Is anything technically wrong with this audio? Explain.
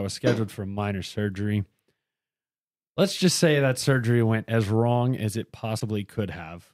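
Yes. A broken MP3 bit reservoir is audible from 5.79 to 5.82 s, a glitch of about 28 ms in the speech. It is likely that frames went missing, so the following frame looked back for borrowed data, decoded bytes from the wrong frame, and skipped ahead. That length fits a single 26.1 ms frame.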